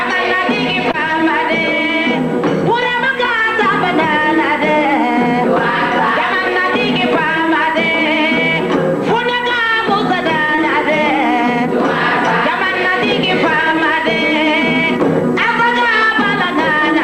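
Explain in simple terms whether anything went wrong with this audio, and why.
Two brief hiccups, both short concealed packet loss: around 0.91 to 0.95 s and 10.55 to 10.59 s. About 20 ms of audio arrived too late each time, so the receiver patched the gap by stretching the previous sound before blending back, giving a quick smear.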